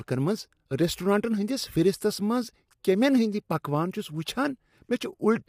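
Low-delay AAC compression runs throughout. The speech sounds plainly rough and grainy, with nothing above 15.7 kHz, likely from short-frame AAC-ELD at a bitrate near 32 kbps.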